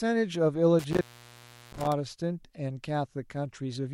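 Intermittent contact affects the speech from 0.79 s to 1.92 s. A loose cable or plug in the signal path briefly loses its connection, so the line goes open for roughly 0.72 s within that span. The audio drops out abruptly instead of fading, with scratchy crackle at the edges as the contact breaks and then reconnects. While the circuit is open, the voice vanishes and only a faint hiss remains until the connection is restored.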